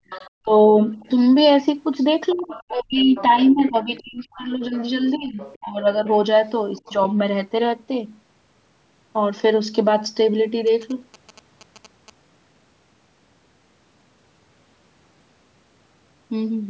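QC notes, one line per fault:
0.0–0.99 s, 2.34–6.05 s and 6.79–6.98 s, speech suppressed in double talk: the talker's level sinks while a second voice overlaps. The drops are about 40 dB deep early on and about 25 dB across roughly two seconds in the long stretch, with only about 5 dB at 6.8 s. An echo canceller clamping both talkers is the likely cause. The dips track the overlap rather than the talker's own phrasing, which separates this from ordinary fading.
0.1–0.3 s, 0.87–1.09 s, 2.3–6.13 s and 6.76–6.93 s, other side's voice leaking through: a fainter second voice sits under the main one. It is about 20 dB down in the first scrap and the long stretch, and about 30 to 35 dB down elsewhere. Loudspeaker playback not fully cancelled is the likely cause. Unlike crosstalk, these scraps coincide with the suppression dips.
10.67–12.1 s, GSM signalling bursts: a galloping dit-dit-dit of short buzzes at about 217 Hz, roughly 25 dB below the speech. 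A nearby 2G phone exchanging signalling bursts, rectified by the audio circuitry, is the likely cause. Its stop-start grouping distinguishes it from steady mains hum.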